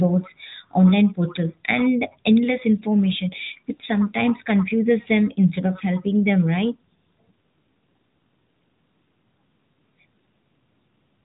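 No technical faults can be heard in this speech, which comes through an AMR narrowband mobile codec at 12.2 kbps with light codec damage and nothing above about 3.8 kHz.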